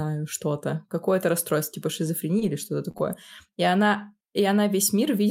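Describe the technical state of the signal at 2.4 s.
Short concealed packet loss runs from 2.39 to 2.43 s, right after "расстройство типа". About 20 ms of audio never arrived in time, and the decoder bridged about 18 ms of the hole by extending the preceding sound, carrying its pitch forward if voiced or substituting shaped noise if not, before blending back into real signal. The result is a brief smear or wobble across that instant, and any short consonant falling inside it can go missing.

A lost packet rebuilt from error correction occupies the final 20 ms of that span, 2.41 to 2.43 s. This packet was also lost, but the one after it carried a low-bitrate copy (Opus in-band forward error correction), so the decoder played that copy and no silence appears. That stretch sounds rougher and noisier than the surrounding audio, a coarse patch closing the concealed section just before the signal returns to normal decoding.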